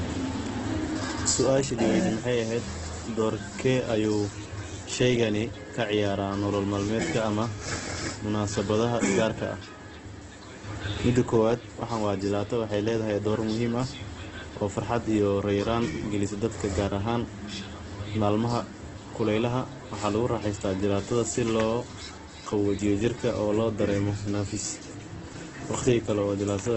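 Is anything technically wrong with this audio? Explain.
Yes. Throughout the speech, nothing is heard above 8.2 kHz and the sound is rough and grainy, which points to heavy damage from a rate near 12 kbps, likely Opus compression in its CELT mode. Starved bands are filled with folded copies or noise instead of being left empty, so it grates rather than swirling like MP3.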